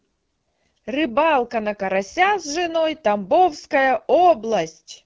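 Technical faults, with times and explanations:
Throughout: AMR wideband (HD Voice) codec. The speech has a rough, raspy, buzzy texture that fits one of the lowest AMR-WB rates, around 8.85 kbit/s, where the pulse-excited vocal tract model lacks the bits to follow fine detail. Content stops near 7.3 kHz, with the top band filled by shaped noise.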